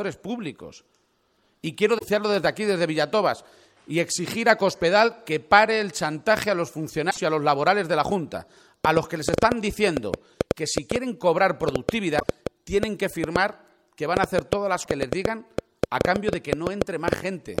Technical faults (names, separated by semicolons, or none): broken MP3 bit reservoir; train of clicks